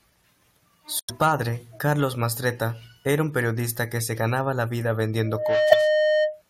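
It's a speech clip with two problems. At 0.95 to 1.10 s there's a chirpy, fairly loud burst, a corrupt frame decoded across a handful of damaged frames whose flipped bits put energy at the wrong frequencies, and a second, louder blip at 5.70 to 5.75 s. Right after "se ganaba la vida", at 5.22 s, a loudspeaker feedback squeal at 613 Hz swells up over about a third of a second and rings, a bit louder than the speech, until 6.42 s, because the mic is hearing its own speaker.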